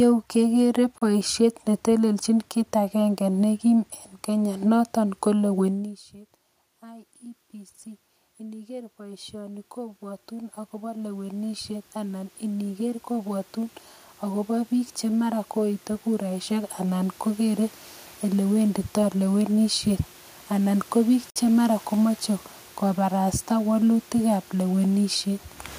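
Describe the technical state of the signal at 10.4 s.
At 10.4 s the automatic gain control is rising. After the input fell by about 23 dB, it has been slowly raising gain by about 20 dB from 8.37 s to 19.60 s, so voice and room noise swell upward together over those seconds.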